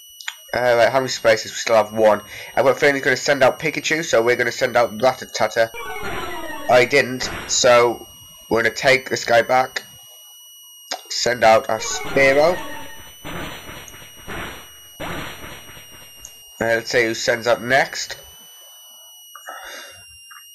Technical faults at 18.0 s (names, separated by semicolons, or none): switching supply whistle